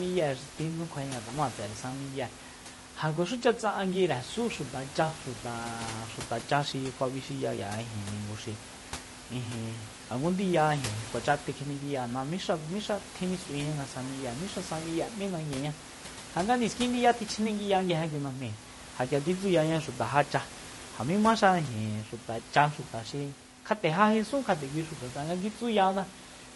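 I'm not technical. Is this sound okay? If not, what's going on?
No. Low-delay AAC compression runs through the whole clip, from start to finish, and it is plainly audible: the speech sounds rough and grainy, with a hiss caught between the tones of the voice and a dull or artificial-sounding top end. This is likely the low-delay coding used in video calls. It chops sound into very short slices, which blurs the voice's pitch detail, and with too little data the gaps fill with noise. Some background noise from the room sits well below the speech.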